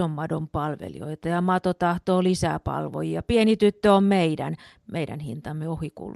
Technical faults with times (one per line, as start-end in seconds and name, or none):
none